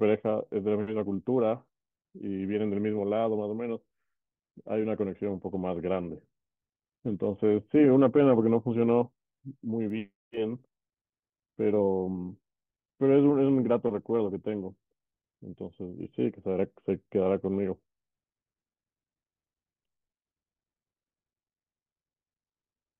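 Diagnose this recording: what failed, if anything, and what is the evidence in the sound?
A single bit flipped somewhere in the digital path, in memory or on a link. At 9.90 s one sample of the speech jumps by a power of two and snaps back. The result is a bit error spike, one broadband tick at about -35 dBFS.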